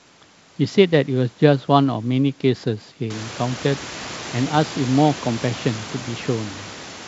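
No technical faults can be heard in this speech clip. The room's own background noise rises by about 19 dB at around three seconds and then sits about 18 dB below the speech, and the G.722 wideband telephone coding at 64 kbit/s leaves at most a faint trace.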